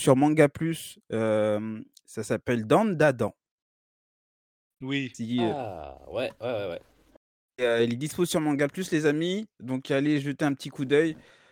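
A speech recording with no technical fault that a listener can pick out anywhere in the signal.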